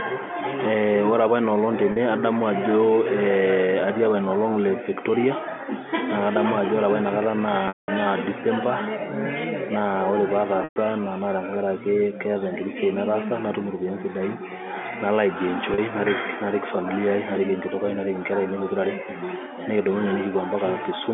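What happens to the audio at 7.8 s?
Packet loss with pitch repetition runs from 7.68 to 7.88 s, with about 200 ms of audio missing. The receiver loops the last pitch period, which briefly buzzes and then fades to silence. Sound returns through a short cross-fade, not the abrupt cut and click of a hard dropout.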